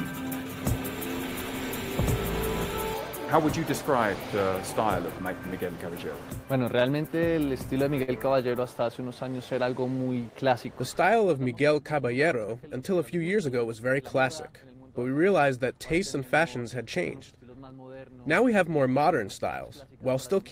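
From 6.79 to 8.10 s, late packets repeatedly drained the jitter buffer, causing repeated stalls (stutter): seven brief gaps, the longest 54 ms, were bridged by extending the previous sound, so the audio catches and drags. Between 8.76 and 10.37 s, a jitter buffer slow-down rebuilt reserve by repeating pitch periods, adding 110 ms, so the sound runs at 94% speed with unchanged pitch. From 12.37 to 13.59 s, a jitter buffer speed-up trimmed excess delay by cutting pitch periods, removing about a tenth of a second, so the audio hurries at 109% speed without any pitch shift.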